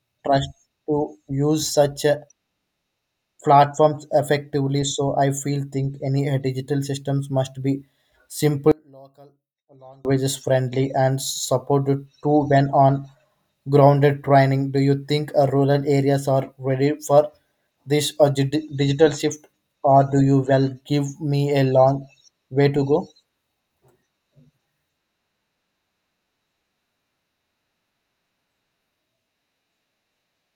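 From 8.72 to 10.05 s the speech suddenly collapses to a faint trace, about 32 dB quieter. The likely cause is one channel inverted: with one side's polarity flipped, the centred voice cancels when the channels combine in mono.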